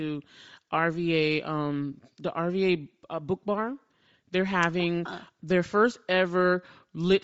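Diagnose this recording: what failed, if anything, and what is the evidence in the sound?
The fault is at the codec stage. Throughout the speech the top of the spectrum sounds breathy and grainy, likely from Bluetooth LC3 compression at a rate that fits 32 kbps with 7.5 ms frames. Emptied high bands refilled with noise give hiss, not a low sample rate's clean, dull edge.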